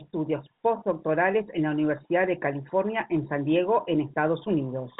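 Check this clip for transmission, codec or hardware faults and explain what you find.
I find no faults in this clip.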